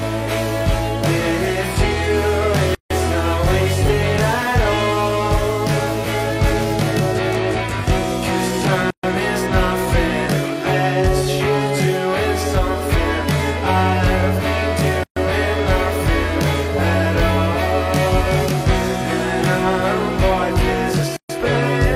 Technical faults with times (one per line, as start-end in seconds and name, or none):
0.00-21.95 channel delay (comb filtering)
2.75-2.90 gap at a join of encoded pieces
8.90-9.03 gap at a join of encoded pieces
15.03-15.16 gap at a join of encoded pieces
21.16-21.29 gap at a join of encoded pieces